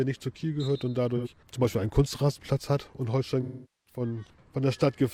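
At 1.17 s the sound turns briefly smeared and noisy for about 85 ms, to 1.28 s. From 3.42 s to 4.00 s a longer gap of about 430 ms decays toward silence, then fades back in. Both are AAC frame loss with concealment: the decoder rebuilds missing frames from the last good spectrum. The short patch fits two lost frames. The longer one fits about ten, so the concealment fades out.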